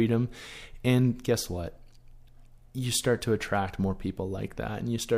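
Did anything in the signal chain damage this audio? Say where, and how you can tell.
No, no signal-chain damage heard.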